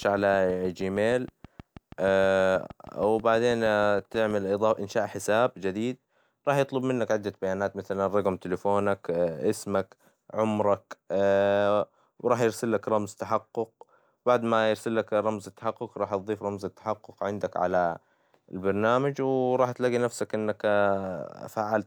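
Something in the chain was likely injecting a repeating pulse, such as interference from nearby equipment or a faulty connection or power supply, and the result in this speech clip is a train of clicks from 0.03 s to 4.32 s. Around thirty near-identical ticks arrive at a regular 6.31 per second, each about as loud as the speech itself, and they continue through the pauses, stopping just before "إنشاء حساب جديد راح".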